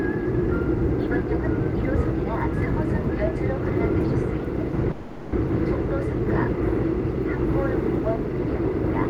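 Packets were likely held up in transit at 4.91 s, draining the jitter buffer and causing a call audio freeze until 5.33 s. The receiver stretches the last sound into a fading buzz for about 410 ms, then resumes where it stopped, nothing lost but everything after arriving later.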